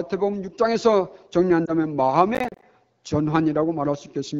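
At 1.66 to 1.73 s there are lost AMR speech frames. Radio errors spoiled about 20 ms of speech, which fits a single dropped frame. The wideband decoder filled the gap from the last good frame at lower gain. It sounds like a brief dip or warble.

From 2.35 to 2.62 s comes processor overload crackle. The processor missed about fifteen buffer deadlines over this stretch, each roughly 10 ms long. Every missed buffer became a hard-edged hole of silence. Together they make a gritty crackle riding on the speech, which then stops.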